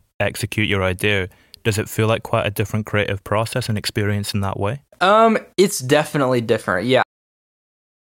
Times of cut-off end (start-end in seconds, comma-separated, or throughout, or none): 7.03-8.04